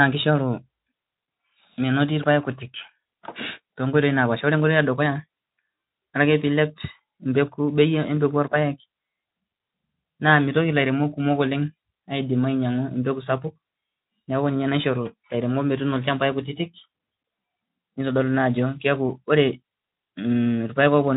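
No faults to report in this speech; the Speex coding path runs as expected, with the band topping out near 3.8 kHz and only light coding texture.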